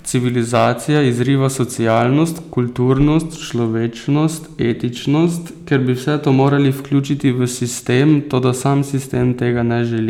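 Hard clipping hits the speech six times: 0.54–1.22 s, 1.87–2.01 s, 2.90–3.17 s, 5.74–5.77 s, 6.28–6.54 s and 7.94–8.47 s. The level runs past what a stage can pass, so the peaks are sliced flat, adding harsh high harmonics. The first stretch is overdriven by about 5 dB and sounds like a gritty fuzz. The later ones exceed the limit by about 1 to 3 dB and come through as brief crackle on loud syllables.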